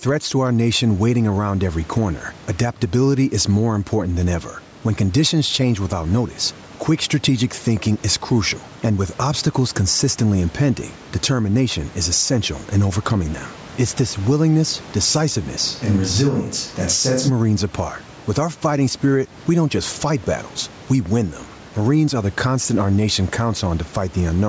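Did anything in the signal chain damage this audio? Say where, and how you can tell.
Yes. Throughout the clip the level behaves like gain pumping, most likely from input gain set far too high with a fast limiter clamping it at the capture stage. The background sits about 30 dB under the speech, and the gain swings by roughly 10 dB. Loud and quiet passages come out squashed toward one level.

From 15.66 to 17.28 s the sound abruptly turns roomy and hollow and loses bass, then snaps back just as suddenly. That points to a switch to a distant microphone, likely because the close capsule's signal dropped out and a farther pickup such as a camera microphone filled in. The level stays roughly where it was, and the added room sound is low, around 40 dB below the speech, so the change shows mainly in tone and reverberance. The call processing's band limit at 8 kHz is present across the whole clip, including this span.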